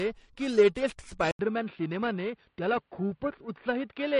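From the start the speech carries a rough, metallic edge that drops away in pauses. This is periodic clock jitter: a clock wobble near 1 kHz puts sidebands around every component.

Throughout, the speech also sounds plainly watery and swirly, with chirpy sibilants and nothing above 10.5 kHz. This is likely MP3 compression at a low bitrate around 40 kbps.

At 1.31 s an 80 ms silence falls, then the sound turns duller and boxier, with nothing above 3.8 kHz, unchanged level and a new noise floor far below the speech. This points to the input being switched to a poorer device.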